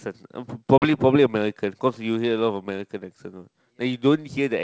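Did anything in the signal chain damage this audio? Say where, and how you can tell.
Yes. Network stage: packet loss on an ADPCM call at 0.78 to 0.96 s. A hard 40 ms gap, which fits about two lost packets. The speech returns slightly distorted as the predictor resyncs.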